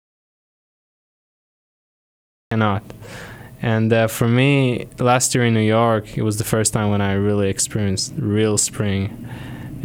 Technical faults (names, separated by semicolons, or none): audio dropout to silence